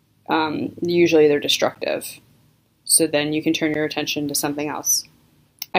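Periodic USB or driver dropouts run from 1.75 s to 5.74 s, recurring every 2.0 s. Each time, the audio interface or its driver stalls briefly and around 10 ms of signal is replaced by silence. The result is roughly three evenly spaced ticks or small pops against the sound.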